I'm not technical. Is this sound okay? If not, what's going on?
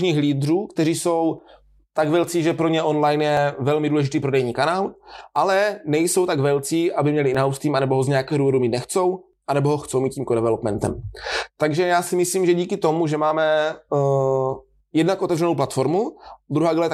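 No. There is audio missing between chunks at 1.39, 3.37, 5.36, 7.35, 9.33, 11.32, 13.31 and 15.29 seconds. At each of these moments a tiny sliver of the speech, a small fraction of a second, drops out, and the sound on either side is joined straight together. The skips come about every 2 seconds, which points to the recording likely being handled in 2-second pieces, with a bit lost each time one piece ends and the next begins.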